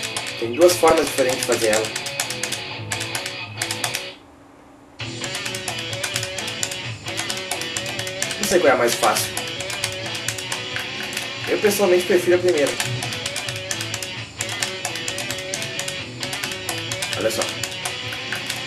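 DAB burbling at 0.80 to 1.13 s, 8.27 to 8.51 s, 12.67 to 12.78 s and 15.04 to 15.27 s: weak-reception bit errors slip past error correction into the MP2 data, putting brief noise blips and level jumps into individual sub-bands.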